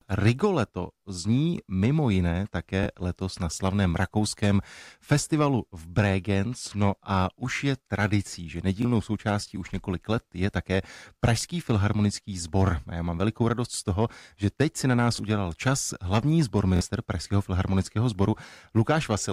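Audio data failed to arrive in time four times in this speech recording, so the device replayed its last buffer. That repeated buffer produces a short stutter at 2.83–2.86 s (after "zní mimo jiné"), 8.82–8.85 s, 15.16–15.19 s, and 16.77–16.81 s (twice there). The 23 ms repeats fit a 1024-sample buffer.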